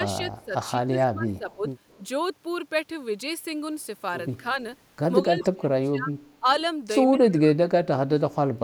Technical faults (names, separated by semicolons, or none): speech suppressed in double talk; echo leak